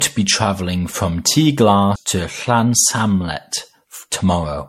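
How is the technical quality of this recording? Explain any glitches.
The recording is degraded throughout and has one brief glitch.

Generation loss, throughout: swirly, hollow, smeared speech with blurred attacks and nothing above 16.4 kHz, likely from about seven successive MP3 encodes near 64 kbit/s.

CD skip at 1.96 s: the laser jumps tracks, giving a tick and a mute of a few milliseconds before playback resumes from elsewhere on the disc.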